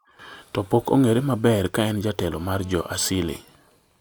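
A speech clip with GSM phone buzz from 2.34 s to 3.36 s: a hard, raspy, steady tone at about 217 Hz sitting roughly 24 dB below the speech. A nearby 2G handset on a call transmits in regular radio bursts, and the audio circuitry rectifies them into a pulse train. On a spectrogram this shows as evenly spaced horizontal lines at 217 Hz and its many harmonics, independent of the speech. The waveform carries a regular comb of sharp pulses.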